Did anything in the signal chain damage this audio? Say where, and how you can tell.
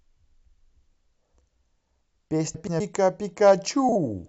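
Yes. The damage is frames out of order, a network or transport fault. At 2.54 to 2.80 s, two neighbouring blocks of about 128 ms play with their halves exchanged. That points to runs of four frames arriving swapped. At 3.89 to 3.96 s, the same happens with 32 ms blocks, which fits single frames. Each spot sounds like a garbled flutter. The decoder played them as received. No time goes missing.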